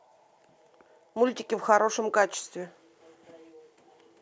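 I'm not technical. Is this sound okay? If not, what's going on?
Yes, this recording sounds fine, with nothing going wrong that you'd need to worry about.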